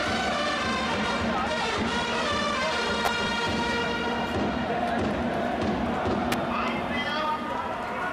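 At 1.81 s the audio jumps ahead by about one 20 ms frame, a case of compressed frames skipped. From 3.05 to 3.08 s and again at 6.32 s, sharp snaps sit on top of the sound, likely an electrical switching spike picked up from nearby arcing. Unlike a frame skip, nothing is lost.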